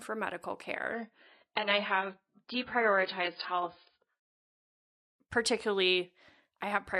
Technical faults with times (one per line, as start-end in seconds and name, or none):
0.93-4.93 adaptive stream at a lower bitrate